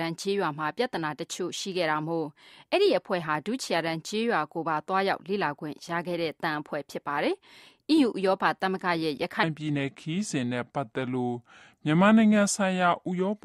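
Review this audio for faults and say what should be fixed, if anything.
From 9.43 s to the end of the clip, at 13.45 s, a section at the wrong speed plays back at 0.782 times its original rate. Tempo and pitch drop together, so the sound turns slow and deep, roughly four semitones lower, with an abrupt shift at the boundary. The likely cause is this stretch being clocked at a lower rate than it was recorded at, during editing or playback. To prevent it, confirm every segment shares the session's sample rate before export.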